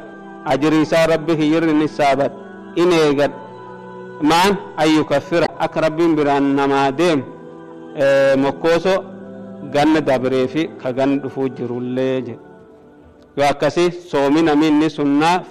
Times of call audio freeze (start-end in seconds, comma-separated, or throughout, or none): none